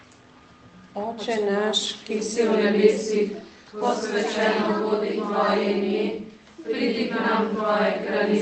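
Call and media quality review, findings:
No faults found in the clip. The call path shows in a top end that stops near 8 kHz and coding texture, which fits Opus at around 24 kbps.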